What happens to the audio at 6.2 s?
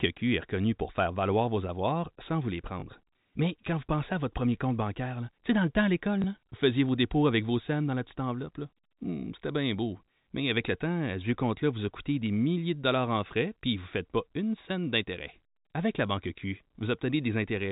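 Packet loss with the last packet repeated occurs at 6.22 s: a 20 ms gap, which points to one lost packet, is filled by replaying the previous chunk. The single repeat is heard as a small blip.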